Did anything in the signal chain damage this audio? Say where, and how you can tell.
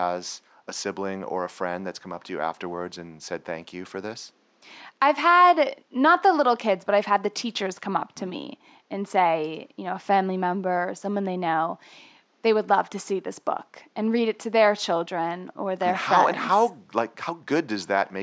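No, nothing damaged this audio.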